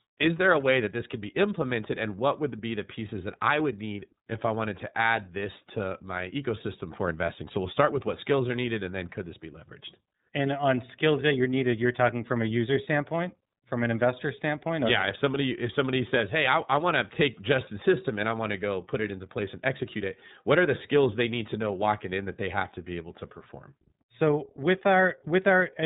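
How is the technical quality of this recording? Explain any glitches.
The quality is held back by the iLBC codec across the whole speech clip. Each 30 ms frame is coded independently, so the speech sounds clear but roughish and synthetic, with nothing above 3.8 kHz, which fits the 13.33 kbps mode.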